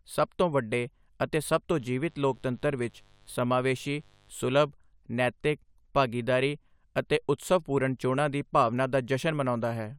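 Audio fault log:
1.73 to 4.30 s, mains buzz: a switching interference path picks up sharp spikes twice per 50 Hz cycle, so a steady raspy buzz with harmonics into several kHz sits well beneath the speech between "ਤੋਂ ਵੱਡੇ ਅਤੇ ਸਭ" and "ਸੁਲਭ ਨੈਤਿਕ ਭਾਗੀਦਾਰੀ ਅਤੇ".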